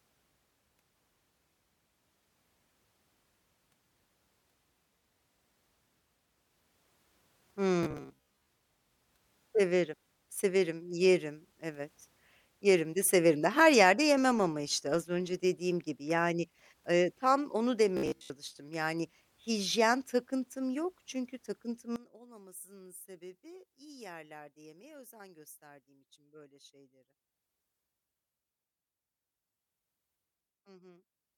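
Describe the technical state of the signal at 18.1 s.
At 18.1 s the speech has robotic sound from repeated short buffers, from 17.97 to 18.3 s, just after "yani ııı tam onu". Most of the span is likely short buffers of about 15 ms replayed, forcing a rigid, metallic 66.8 Hz buzz. A spectrogram shows evenly spaced harmonics, and the waveform shows a roughly repeating cycle.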